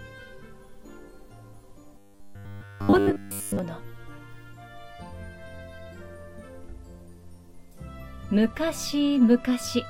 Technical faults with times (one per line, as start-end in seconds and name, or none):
1.98-3.59 robotic sound from repeated short buffers